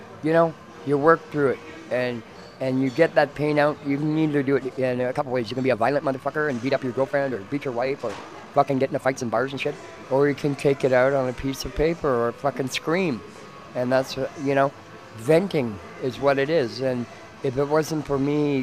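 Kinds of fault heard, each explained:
Time-stretched section: from about 4.45 to 9.69 s the audio suddenly runs about 1.69 times faster while the pitch stays put, so it sounds rushed; that's likely software squeezing the passage to fit a length by dropping short slices.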